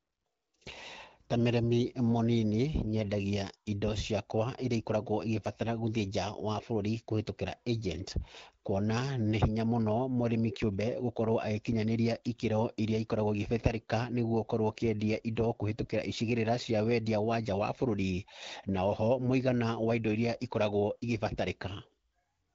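Speech recording with no technical faults to report.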